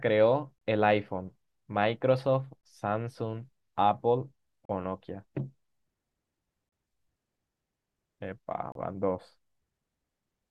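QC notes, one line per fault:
0.58, 2.61, 4.65, 6.69 and 8.72 s: gap between stream segments. Timestamps of consecutive 2-second segments fail to meet, so the player pads 23 to 39 ms of silence, cutting hard-edged holes into the speech every two seconds.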